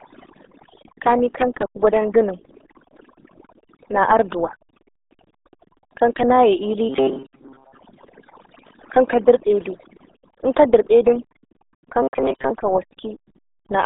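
From start to finish the speech passes through the RealAudio 14.4 codec, the old RealAudio 1 dial-up speech coder. The sound is squeezed into a telephone-like band from roughly 250 Hz to 3.7 kHz, with nothing at all above 3.8 kHz. The heavy coding damage leaves it muffled and gargly, which fits a very low rate around 8 kbit/s. That gargle inside a hard narrow band separates it from a plain low-pass filter, which would muffle the sound without garbling it.

Also present throughout is overdone noise removal. Where the background should be, there is near silence dotted with twinkling specks, because individual frequency bands are being pushed down or switched off whenever they sit close to the tool's noise estimate. The quieter parts of the speech get cut along with the noise. That sparkling residue sets it apart from a simple noise gate, which shuts off the whole signal at once and leaves clean gaps.

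From 12.02 to 12.51 s the speech turns into a rigid, metallic buzz with a fixed pitch of about 134 Hz, though it still loosely tracks the rhythm of the speech. Much of the real audio in that half-second is lost and replaced by repeats. This robotic sound most likely comes from a short buffer, around 7.5 ms long, being replayed whenever new data arrived late. The constant pitch is what distinguishes it from codec warble, which wanders.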